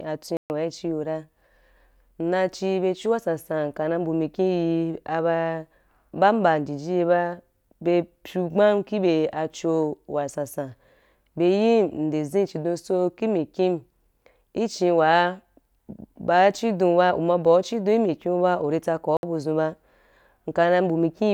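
At 0.37 to 0.50 s and 19.17 to 19.23 s, speech cuts to silence and resumes where it stopped, a Bluetooth stall likely from interference draining the buffer, unlike dropouts that skip ahead.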